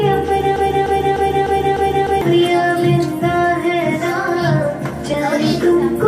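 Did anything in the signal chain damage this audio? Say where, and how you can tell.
Yes. From 0.56 s to 2.21 s the audio falls into a broken-record loop: a 300 ms fragment plays five times back to back, each pass identical, then normal playback resumes. The stage is likely a playback or streaming buffer that stalled and kept re-serving the last block it held instead of new data. Because the loop substitutes for fresh material, the audio that belonged in those 1.65 seconds is missing, not delayed.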